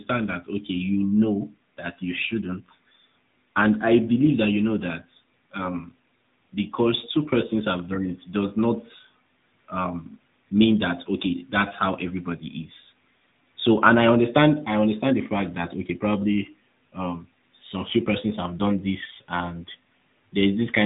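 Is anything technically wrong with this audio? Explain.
Yes, an AMR narrowband mobile codec affects the whole speech clip. Nothing passes above about 3.8 kHz, and the pulse-driven vocal-tract model adds plainly audible buzzy, synthetic colouring, consistent with a mid-rate mode near 10 kbps. That synthetic buzz distinguishes it from a simple low-pass filter.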